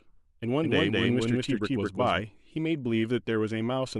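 Speech clip with a doubled audio track from 0.62 s to 2.20 s: a second full-band copy trails the original by roughly 200 ms at about equal level, with no decay or room colour, starting and stopping abruptly. It is likely a slower capture path mixed in alongside the direct one.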